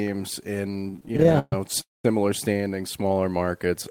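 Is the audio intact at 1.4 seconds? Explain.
No. From 0.71 to 1.53 s the speech has repeated stalls (stutter): packets arrived late, the jitter buffer kept running dry, and the receiver stretched the last sound across twenty gaps, the longest 130 ms. Nothing drops out, but the speech drags and stutters.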